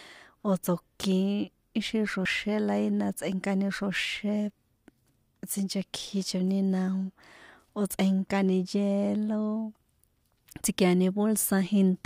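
At 2.25 s, just before "la ína", the speech jumps forward with no silent gap, dropping roughly 50 ms. This is audio missing between chunks, likely from a recorder handing over between 5 s blocks. Unlike a dropout, the two sides are butted together, so it skips rather than pausing.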